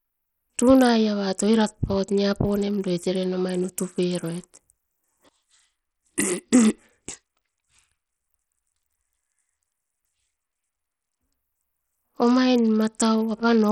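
Speech runs through the whole clip with heavy codec damage. The likely cause is Bluetooth SBC compression. Nothing is left above 14.1 kHz. The top sub-bands get too few bits, so the treble thins out and flickers. The remaining bands are coarsely quantised. That leaves a gritty noise and some aliasing riding on the speech. The damage points to a small bit pool, in line with a bitrate of about 64 kbps.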